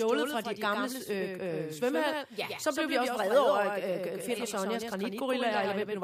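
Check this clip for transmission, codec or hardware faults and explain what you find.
One fault runs throughout: a doubled audio track. A full-band copy of the speech trails about a tenth of a second behind, a few decibels quieter, likely from a second, slower capture path.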